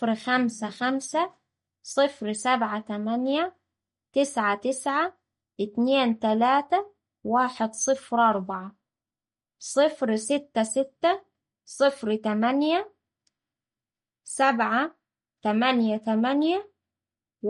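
From start to finish the speech carries plainly audible codec damage, likely MP3 compression. Nothing survives above about 11.1 kHz, so the top end just stops, and the sibilants come out dull and chirpy. Underneath there's a watery, swirling texture where faint spectral detail keeps flickering in and out as the encoder starves quiet bands of bits, and consonant onsets get smeared. That combination fits a low bitrate somewhere around 48 kbps.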